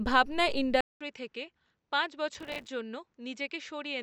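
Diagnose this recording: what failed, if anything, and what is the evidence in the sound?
At 0.81 s, 200 ms of silence, then quieter, duller speech cut off above 7.9 kHz, with faint new hiss. The input likely switched to a poorer device.

From 2.35 to 2.69 s, a gritty crackle of tiny silent gaps. This is processor overload crackle at the driver or buffer stage: roughly forty missed buffers of about 3 ms each.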